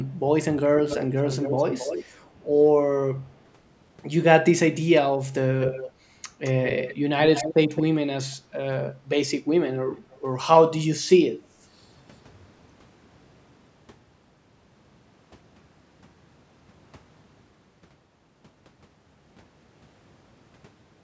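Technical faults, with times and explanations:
0.86–2.05 s, 5.61–5.92 s, 6.44–7.83 s and 9.91–10.19 s, echo leak: a delayed copy of the speech sits under the talker, trailing by 270 ms in the first stretch, 216 ms in the second and third, and 285 ms in the last. It is about 10 dB below the speech, dropping to about 15 dB below at 9.91 s. The likely cause is a far-end speakerphone whose echo canceller let part of its loudspeaker pickup back down the line.
11.44–11.55 s, background gated by the echo canceller: the room sound behind the speech dips by about 10 dB for roughly a tenth of a second, then comes back. The echo canceller pulled the microphone down hard while the loudspeaker was active, taking the background with it, and released once it judged the echo risk had passed. This produces a brief hole in the ambience rather than a change in the speech itself.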